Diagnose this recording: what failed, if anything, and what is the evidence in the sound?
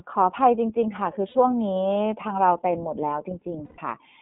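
The whole clip carries iLBC codec coloration, a codec-stage fault. The speech is confined to a telephone band of roughly 150 Hz to 3.5 kHz and has a plainly audible rough, synthetic grain. That grain is what iLBC produces when it codes the excitation of each frame independently, and it fits the 13.33 kbps mode with 30 ms frames. A simple band-limited analogue line would sound dull but smooth. This sound is gritty.

The network stage adds lost iLBC frames at 1.29 to 1.35 s, about 60 ms, and at 3.65 to 3.79 s, about 120 ms. During both gaps the decoder holds the last pitch cycle as a buzzy, breathy sustained vowel, and in the longer gap it fades. A dropout would leave silence and a glitch would click, but these gaps sound like a stretched vowel. The speech is clean again almost immediately afterward because each iLBC frame decodes without depending on the one before it.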